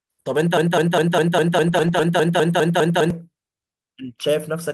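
A speech recording in which, from 0.57 to 3.10 s, a 0.2 s fragment repeats exactly twelve times back to back: a broken-record loop, likely a stalled player or stream resending its last buffer. Unlike a stutter or echo, the fragment is identical each time and the audio that should have played is lost. Within that span, lost packets rebuilt from error correction sound rougher and noisier, across about 180 ms from 1.67 to 2.01 s and again from 2.49 to 2.51 s. Unlike concealment, the rebuilt audio leaves no gap or smear.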